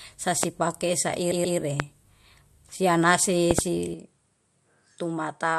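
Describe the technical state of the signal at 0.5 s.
Right around there you've got a loud pop, from 0.43 to 0.46 s. It's a single sharp hit, about 20 dB above the speech, which carries on underneath. The likely cause is a sudden voltage pulse, say from static or a switch, that got into the signal chain.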